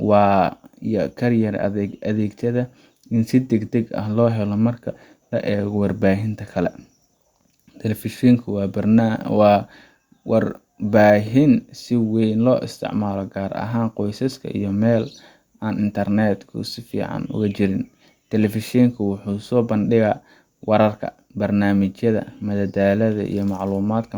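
No technical faults can be heard anywhere in the recording.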